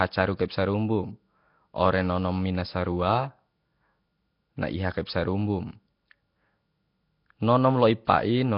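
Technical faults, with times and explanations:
Throughout, Nellymoser compression: the speech is heavily smeared with a hissy halo from noise-filled empty bands, and nothing above 5.3 kHz, likely Flash's Asao codec at roughly 22 kbps.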